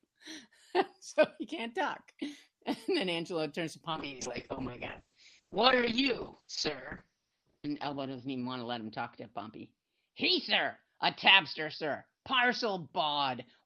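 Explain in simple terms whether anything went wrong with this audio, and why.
Right after "turns to", at 3.91 s, there's a call bitrate drop: the connection squeezed the audio, so it turns rough and muffled, losing its top end, through to the end.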